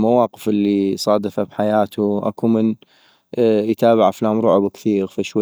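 Nothing stood out on listening to this speech recording.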